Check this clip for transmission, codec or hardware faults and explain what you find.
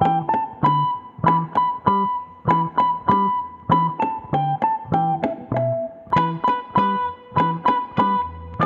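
No transmission, codec or hardware faults are audible anywhere in the clip.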